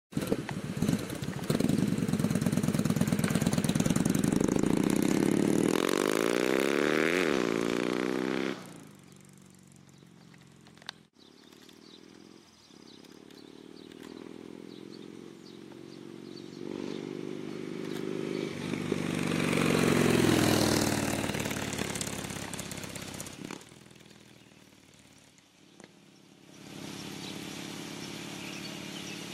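Zipper noise at 23.22 to 23.73 s and 26.38 to 26.84 s: the level drops by roughly 15 dB, then climbs back, in coarse steps of about 2 dB, around twenty a second, with no smoothing. Each step clicks, giving a ticking zip over the sound.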